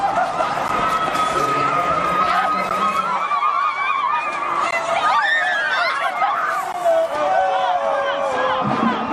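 Gaps at joins of encoded pieces fall at 0.68, 2.69, 4.71 and 6.72 s, every 2 s: separately encoded chunks were spliced untrimmed, so encoder delay and end padding leave brief 12 to 16 ms dropouts with smeared edges.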